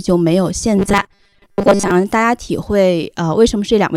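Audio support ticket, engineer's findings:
Robotic sound from repeated short buffers, 0.77 to 1.91 s. Speech turns into a rigid metallic buzz at 200 Hz. Likely cause: audio arriving too seldom at playback. A 5 ms slice is looped. Most of the real signal is skipped.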